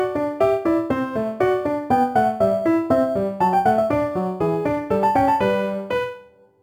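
Crude rate conversion runs through the whole sound. Samples were dropped or repeated with no filtering, a pattern that fits a 48 kHz to 44.1 kHz change. The error, around 30 dB below the signal, adds an inharmonic gritty fizz tracking louder, brighter passages.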